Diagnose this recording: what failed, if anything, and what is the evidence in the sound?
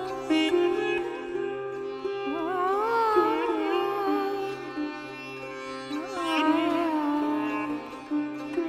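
Nothing in the chain fails here: the converter, buffering, format conversion and playback stages all pass the signal without an audible defect anywhere in the recording.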